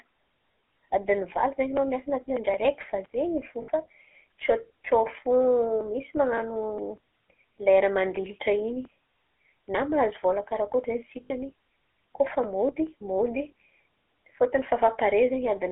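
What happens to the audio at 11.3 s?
From 11.24 to 11.31 s the sound turns into a brief rough, metallic ring instead of continuing normally. These are lost GSM frames: for about 60 ms, which fits three dropped 20 ms frames, the decoder repeated the last good frame's settings rather than decoding fresh data.

Around that moment the sound also has a plainly audible buzzy, gravelly roughness within a narrow 300 Hz to 3.4 kHz band. This comes from the GSM full-rate codec, consistent with its 13 kbps coding, which models the vocal tract and drives it with a sparse, regularly spaced pulse excitation.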